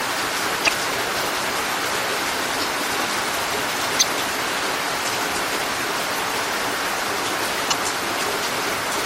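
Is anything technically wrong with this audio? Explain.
Yes. Throughout, the sound has a watery, swirling character with a dulled top end and smeared attacks. This is likely MP3 compression, at a level consistent with a bitrate around 64 kbps. When bits run short, the encoder cuts the treble and drops weak frequency lines that flicker frame to frame, producing plainly audible damage.

There is also damaged data in a compressed stream at 0.64 to 0.69 s, 3.99 to 4.03 s and 7.70 to 7.74 s. Each event lasts about 45 ms. The corrupted bytes make the decoder misread the frames and resynchronise, which is heard as a brief chirp or squawk, sometimes with a jump ahead.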